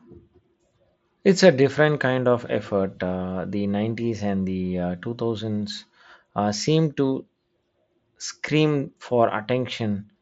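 No faults found in the speech; the top end stops near 7.7 kHz, as expected from a Bluetooth mSBC headset path.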